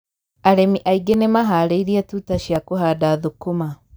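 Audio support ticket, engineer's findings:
Repeated buffer: brief clicks in the speech at 1.14 s and 2.56 s. A tiny 1.45 ms slice replays, which fits a 64-sample buffer. Once at the first spot, twice at the second, so a few ms lost. The playback device is starved and looping its last buffer.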